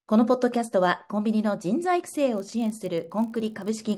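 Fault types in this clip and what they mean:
Filter restarted on every block: from 2.36 s, the filter's memory is cleared per block; a tick every 20 ms forms a 50 Hz buzz tracking level.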